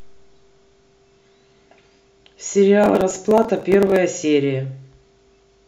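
Processor overload crackle runs from 2.84 to 3.96 s: dozens of very short buffers miss their deadlines and are skipped, leaving hard-edged gaps heard as gritty tearing.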